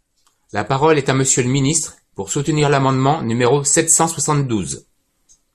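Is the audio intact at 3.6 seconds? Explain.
Yes, the audio is intact at 3.6 seconds, with no fault audible at that point.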